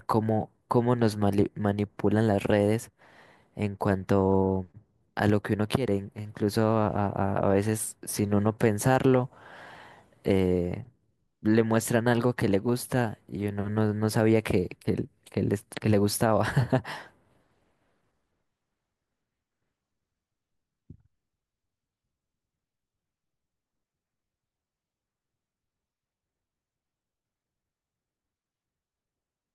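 Nothing stood out on listening to this speech recording.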